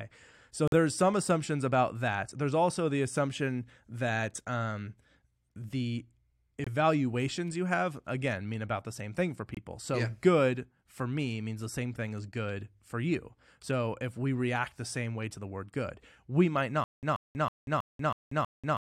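Abrupt holes of silence at 0.68 to 0.74 s, just before "some assumptions about that", at 6.64 to 6.68 s, and at 9.55 to 9.59 s, after "the same thing for", are corrupt frames muted: each gap suggests two damaged compressed frames rejected by the decoder and replaced with silence. From 16.84 s, after "word good we might", a 133 ms burst repeats six times every 322 ms with 188 ms of digital silence between, lasting to the end. This stutter with silent gaps is likely a stalled stream replaying its last fragment.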